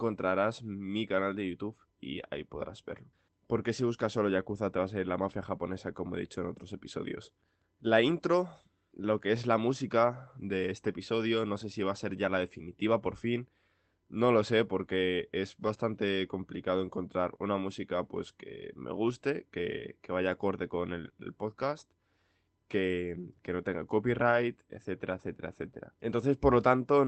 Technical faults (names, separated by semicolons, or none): lost packet rebuilt from error correction; short concealed packet loss